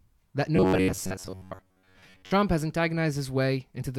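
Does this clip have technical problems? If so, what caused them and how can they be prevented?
Yes. From 0.56 to 2.31 s the speech becomes a rigid metallic buzz near 93.8 Hz, robotic sound likely from repeated short buffers of about 10.7 ms replacing most of the audio. Prevent it by enlarging the audio buffer so new data arrives in time.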